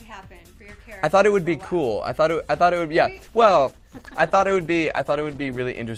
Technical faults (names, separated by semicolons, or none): call bitrate drop